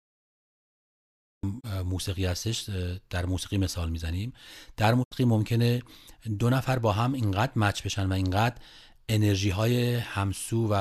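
Cut-off start, 0 to 1.43 s: digital silence, then the speech enters abruptly mid-sound with no attack, because capture began late. Digital broadcast dropouts at 1.59 s and 5.02 to 5.13 s: the receiver muted through a 20 ms fade as frames were lost, leaving holes of about 24 ms and 72 ms, which fit one and three lost frames.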